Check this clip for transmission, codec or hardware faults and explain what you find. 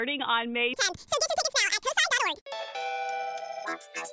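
One fault is present. From 0.74 s to the end, the clip has a wrong sample rate, which fits 8 kHz audio being played at 16 kHz without conversion. Sound runs twice as fast and 12 semitones (an octave) higher. A spectrogram shows everything shifted upward and squeezed to half its duration, and the waveform looks compressed in time.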